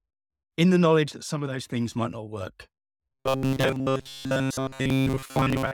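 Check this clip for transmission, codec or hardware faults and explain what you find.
One fault is present. Robotic sound from repeated short buffers, 3.12 to 5.74 s: the speech becomes a rigid metallic buzz pitched near 133 Hz that loosely follows the words. The likely cause is audio arriving too seldom, so a segment of about 7.5 ms is replayed again and again while most of the real signal is skipped.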